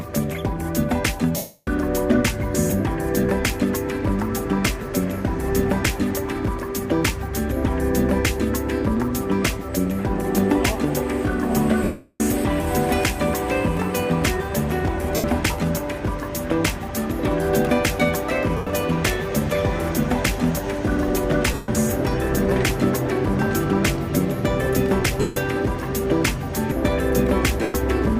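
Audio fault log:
1.36 to 27.74 s, lost LE Audio frames: Gaps occur at 1.36 s (0.31 s), 11.84 s (0.36 s), 15.16 s (0.08 s), 18.57 s (0.10 s), 21.54 s (0.15 s), 25.20 s (0.16 s) and 27.62 s (0.12 s). The decoder repeats the last spectrum with random signs, so tones blur into noisy smears. The two longest gaps fade toward silence. The gap lengths fit 7.5 ms frames.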